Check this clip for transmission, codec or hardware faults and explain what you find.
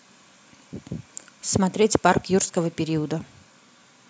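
No faults detected here.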